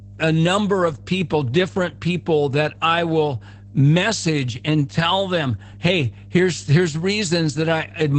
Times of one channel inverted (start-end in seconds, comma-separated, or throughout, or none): none